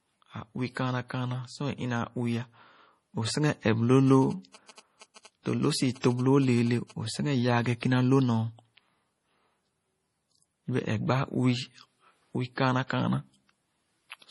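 Throughout the speech, the treble stops dead at 11.4 kHz, and the sound has a watery, swirling quality with chirpy, metallic edges on sibilants. The damage is heavy and points to a low bitrate around 32 kbps, the likely cause being MP3 compression. The encoder discards weak frequency lines when bits run short, so they flicker on and off between frames. On a spectrogram this shows as a hard horizontal ceiling at 11.4 kHz, with the area below broken into isolated blobs and holes instead of continuous texture.

From 4.07 to 6.92 s, GSM signalling bursts cut across the speech as a galloping dit-dit-dit of buzzes at roughly 20 dB below the signal. A nearby 2G phone is transmitting short groups of radio bursts, and the audio circuitry rectifies them into sound repeating at 217 Hz. On a spectrogram they appear as short vertical bands with a comb of harmonics spaced 217 Hz apart. The waveform shows clustered blocks of rapid, regular pulses.

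From 6.00 to 6.04 s, pre-echo spreads a brief hiss over about 31 ms just ahead of a sharp attack, blurring its onset. The transform codec distributes its quantisation noise across a whole block, so noise sized for the loud attack also fills the quiet moment before it. On a spectrogram a faint broadband smear leads the onset. In the waveform, low-level noise rises before the transient instead of the attack starting cleanly.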